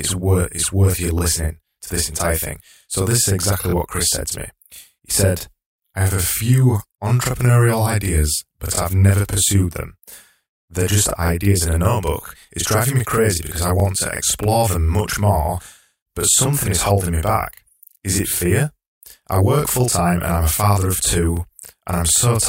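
Right from the start, and for the whole clip, there's a channel delay (doubling): one side of the stereo pair is running about 40 ms behind the other, and once they're folded down to mono you hear both copies at equal strength. At 40 ms that reads as a thick, slightly hollow doubling of the speech, almost a tight slap, rather than a clean single voice. A late buffer on one channel would do exactly that.

On top of that there are overlapping chunks. The audio looks like it was handled in 2.5 s blocks, with each new block starting roughly 23 ms before the previous one finished, so that sliver plays twice at the join. You get a quick stutter-click at 1.19–1.21 s, between "worth it's worth you" and "to this entire thing"; at 11.28–11.30 s; at 13.80–13.82 s, between "me crazy because I" and "to explore them much"; at 16.32–16.35 s; and at 21.37–21.39 s, right after "a father of two".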